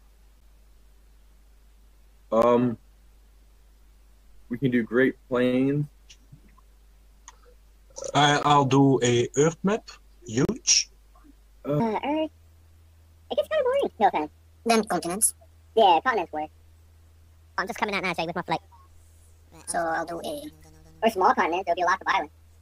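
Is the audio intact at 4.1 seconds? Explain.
Yes, at 4.1 seconds the audio is intact, with no dropout, click, distortion or other fault at that point.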